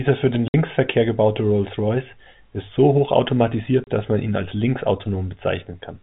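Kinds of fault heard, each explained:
Packet loss filled with silence: audio packets never arrived and the receiver substituted silence, leaving holes in the speech of 60 ms near 0.48 s and 30 ms near 3.84 s.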